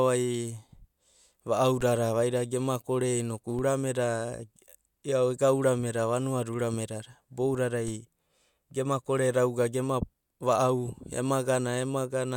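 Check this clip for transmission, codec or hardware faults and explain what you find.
Three DC steps occur, at 1.81, 3.59 and 7.88 s. Each time, the waveform's zero line jumps by about -29 dBFS, then decays through a 20 Hz high-pass, giving a brief low thump beneath the speech.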